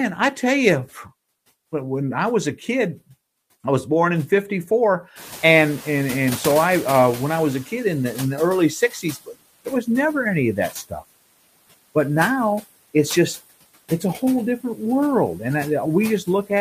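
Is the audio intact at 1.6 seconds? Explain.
No. Noise suppressor artifacts run through the whole clip, including 1.6 s: the suppressor pulls steady noise down by about 20 dB frame by frame, so the noise dips between phrases and swells under the speech. A spectrogram shows the background floor pumping in blotchy, flickering patches.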